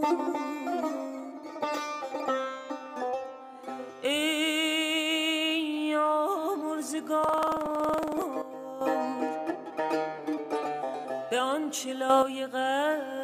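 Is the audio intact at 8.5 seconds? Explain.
No. A sudden gain jump runs from 8.42 to 8.81 s: the audio and its background noise drop together by about 10 dB at a single sample, then return. The likely cause is a digital gain setting applied without any ramp.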